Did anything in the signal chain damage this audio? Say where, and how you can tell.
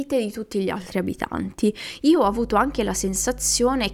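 Yes. Mains hum enters in the analogue wiring: from 2.24 s to the end of the clip a steady 50 Hz tone sits roughly 15 dB below the speech. A ground loop or nearby transformer is coupling the power line into the signal path.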